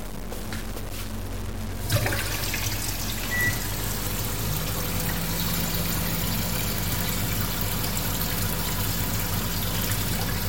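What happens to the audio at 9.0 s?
The sound at 9.0 s carries the grainy, signal-following distortion of low bit depth without dither, which runs through the whole clip. The likely cause is truncation to about 6 bits with no dither, so the error moves with the sound, roughly 15 dB below it, and quiet passages turn gritty or sputter. A waveform would show visible staircase steps, and a spectrogram a broadband haze that rises and falls with the sound.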